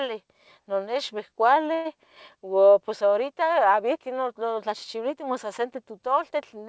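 At 1.74 s, stalled packets likely emptied the jitter buffer, causing a call audio freeze: a fading buzz fills about 0.1 s, then "ua pos" continues with nothing lost.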